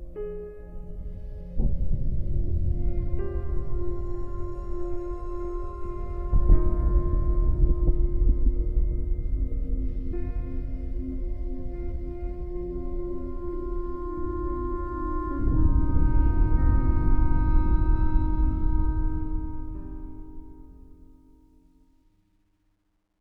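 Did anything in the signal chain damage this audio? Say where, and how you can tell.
Yes: truncation distortion on a fade, from a digital gain stage that drops to a short word length without dither, consistent with about 12 bits. From 18.83 s to 23.21 s the fading sound turns gritty, worst from 21.41 s to the end. The waveform shows staircase steps, and the spectrogram shows a level-dependent distortion floor.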